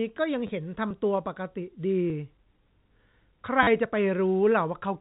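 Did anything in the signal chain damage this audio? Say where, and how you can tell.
Yes. At 0.47 to 0.49 s and again at 3.63 to 3.67 s, the speech briefly turns robotic and stutters, with a short buzz near 100 Hz. This is packet loss with the last packet repeated, at the network stage. The receiver replays held audio across 20 ms and 40 ms gaps, which fits 10 ms packets.

At 2.10 s the speech jumps forward with no silence, so about 10 ms of sound is missing. This points to a dropped buffer (overrun) at the driver or buffer stage, likely the program not collecting its samples before the hardware overwrote them.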